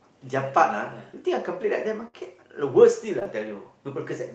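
From 2.07 to 2.15 s there is a burst of packet loss. The receiver stretches the last sound for about 59 ms, fading it into a buzz or hiss. About 60 ms of audio is then skipped.

Short concealed packet loss follows at 3.19 to 3.28 s, with a second overlapping one at 3.23 to 3.27 s. Each drops 20 ms, patched with 15 and 20 ms of synthesised continuation. The first also stretches timing by a few milliseconds. The result is a brief smear or wobble.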